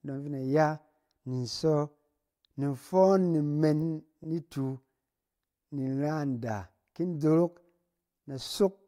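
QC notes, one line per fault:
4.23–4.25 s, repeated frames: one 23.2 ms block of speech plays a second time, a brief stutter that fits a single 1024-sample frame at 44.1 kHz sent twice; unlike a dropout, nothing is lost, and the clip runs 23.2 ms longer.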